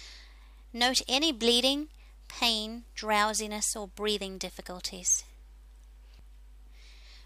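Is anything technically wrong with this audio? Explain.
No, the signal has no technical faults that can be heard anywhere in it.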